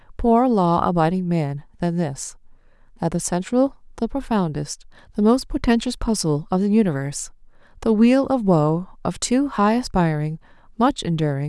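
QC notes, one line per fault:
Nothing stood out on listening to the speech.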